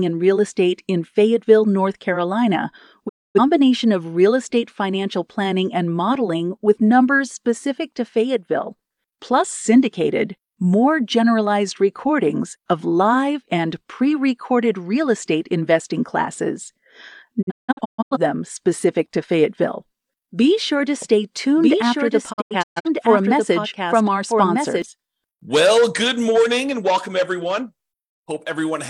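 A speech recording in which the receiver loses the digital signal or gets failed frames three times and mutes until good frames return, causing digital broadcast dropout: a quick 20 ms fade into silence at 3.07–3.40 s (about 256 ms lost), then scattered short holes at 17.41–18.17 s (469 ms lost, longest gap 171 ms) and 22.32–22.89 s (299 ms lost, longest 128 ms). From 21.02 to 24.82 s a doubled audio track appears. The same speech is audible a second time, roughly one and a half seconds late and about 5 dB quieter, full-band and without any room colour, starting and stopping abruptly. It is likely a second capture through a slower path.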